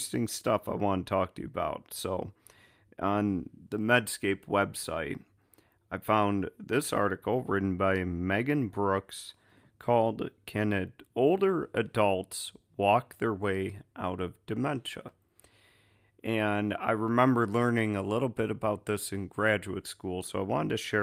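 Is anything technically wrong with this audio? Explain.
No, nothing in this recording points to a technical problem with how the signal was captured, processed or delivered.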